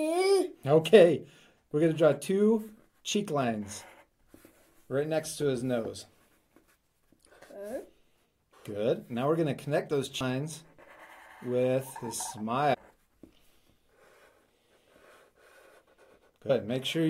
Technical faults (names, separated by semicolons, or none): compressed frames skipped